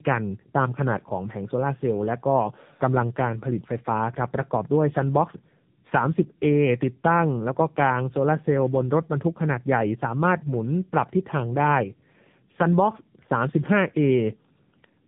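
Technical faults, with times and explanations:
Throughout, tandem speech coding: the speech went through two low-rate speech codecs in a row, decoded and re-encoded at each link border. The character fits AMR narrowband, with a G.711 mu-law hop in between. The second coder worked from the first one's already degraded output, so the losses stacked. The result is rougher, warblier speech than one coder alone produces, and it sounds muffled because nothing above 3.8 kHz survives.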